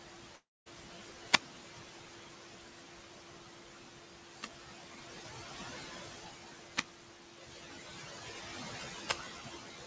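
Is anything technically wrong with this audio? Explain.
Yes. The speech clip has three distinct problems: noise suppressor artifacts throughout, one long network dropout near the start, and four wireless microphone squelch dropouts.

The noise suppressor artifacts run through the whole clip. The suppressor estimates which frequency bands hold steady background noise and pulls them down frame by frame, here by about 15 dB. The room noise, which sits about 18 dB below the speech, therefore drops away in the pauses and swells back under each phrase. Unlike a dropout, this never leaves a clean gap. It is a constant pumping of the background.

The long network dropout runs from 0.36 to 0.68 s. This is likely a stretch of lost packets, about 300 ms long, that the receiver had to conceal. It first extends the last sound as a buzzy continuation that decays, then leaves roughly 220 ms of near silence before the audio resumes with that portion simply gone. 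There is no rise of hiss beforehand. That missing warning, together with the synthetic fade-out, sets it apart from the radio dropouts.

The wireless microphone squelch dropouts occur at 1.22 to 1.55 s, 4.22 to 5.08 s, 6.71 to 7.04 s and 9.00 to 9.28 s. Each happens as the FM radio link weakens. Hiss and static climb until the receiver's squelch shuts the output, leaving holes of near silence of about 150 ms, 520 ms, 245 ms and 120 ms. The speech then returns. The rising static before each mute is the giveaway that distinguishes these from network loss.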